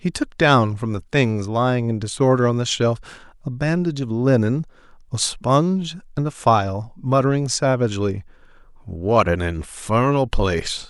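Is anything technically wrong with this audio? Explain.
No, nothing is technically wrong with this audio.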